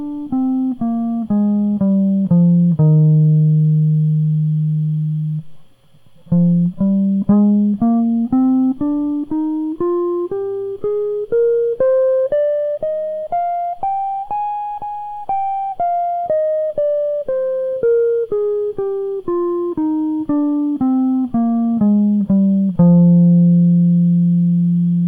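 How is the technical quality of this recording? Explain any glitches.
Nothing in this music recording stood out as a technical problem on listening.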